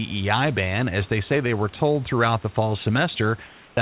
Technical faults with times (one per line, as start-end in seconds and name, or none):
3.47-3.77 comfort noise in place of the background